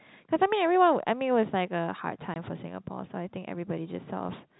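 At 2.34 to 2.36 s the speech drops out for 20 ms: packet loss filled with silence. The gap fits a single lost 20 ms packet, replaced by silence, and its edges are abrupt. The band-limited G.711 telephone coding remains audible around it.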